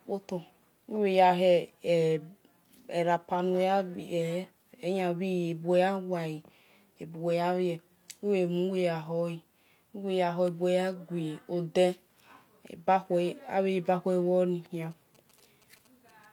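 From 14.83 to 16.26 s, GSM signalling bursts intrude as a galloping dit-dit-dit of brief 217 Hz buzzes, well below the speech. A nearby 2G phone's radio pulses are rectified by the audio circuit. Unlike steady mains hum, the buzz comes in clustered groups.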